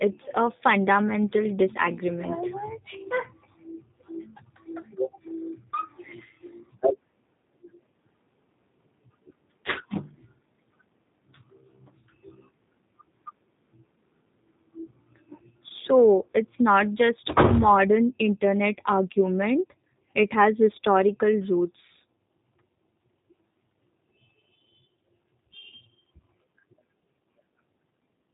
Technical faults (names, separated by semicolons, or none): G.729 codec